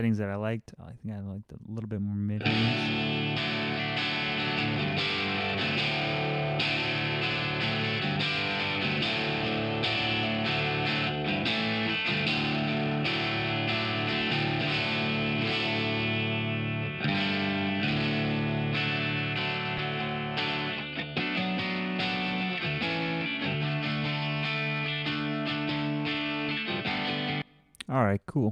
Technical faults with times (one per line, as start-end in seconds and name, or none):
19.78 lost LE Audio frames